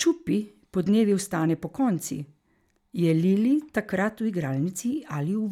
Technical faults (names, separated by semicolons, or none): none